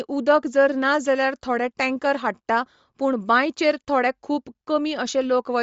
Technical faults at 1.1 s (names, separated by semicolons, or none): Bluetooth LC3 compression